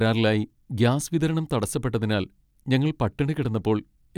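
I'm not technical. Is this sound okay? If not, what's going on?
Yes, this speech recording has no audible technical faults.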